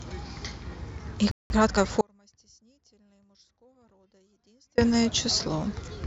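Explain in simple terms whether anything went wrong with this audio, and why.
Playback stall, 1.31 to 1.50 s: the speech stops dead for about 0.19 s and then carries on where it left off. The player most likely ran short of incoming audio, or was briefly held up, and had nothing to play until it recovered.

Time-compressed catch-up, 1.50 to 1.86 s: right after that gap the speech runs at about 1.5 times normal speed without its pitch rising. The player is trimming tiny slices and blending the joins to make up lost time.

Audio dropout to a faint residue, 2.01 to 4.78 s: for about 2.8 s the speech cuts out abruptly, leaving only a faint trace of sound far below the normal level. The main signal was likely lost while the rest of the chain stayed switched on.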